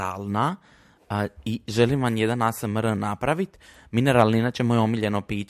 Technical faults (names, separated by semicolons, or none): none